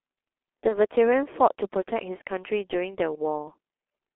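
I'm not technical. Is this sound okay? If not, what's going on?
No. The whole recording sounds muffled and hoarse, as if heard down an old phone line, with consonants smeared and softened. This is the G.723.1 codec, an early internet-phone compression scheme that squeezes speech very hard. It keeps only a narrow band, roughly 250 Hz to 3.4 kHz, so the bass and the crisp top end are gone. It also updates its model of the voice only every 30 ms, which blurs quick sounds.

At about 0.68 s the speech briefly turns into a stretched sound that fades, then takes a moment to recover, up to about 0.79 s. This is VoIP packet loss concealed by the speech codec. A piece of audio went missing in transit, and the gap fits one lost 30 ms chunk. The decoder filled it by guessing, stretching out the last sound it had while turning it down. Because each piece builds on the one before, the voice stays off for a short while after real audio resumes.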